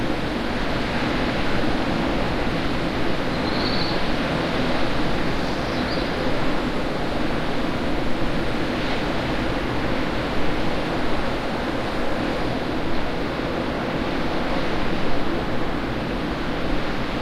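No technical faults occur at any point in this audio.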